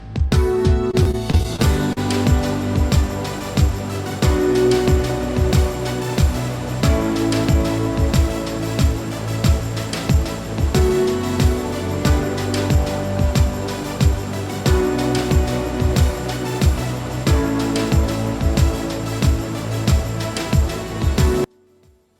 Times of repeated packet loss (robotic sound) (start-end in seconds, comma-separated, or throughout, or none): 0.91-1.98